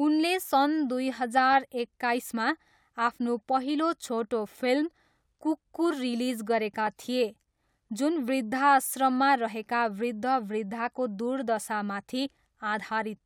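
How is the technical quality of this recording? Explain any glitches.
There are CD scratch ticks from 6.55 to 7.35 s. Six brief ticks, the longest around 2 ms, come from a scratch defeating error correction once per disc rotation.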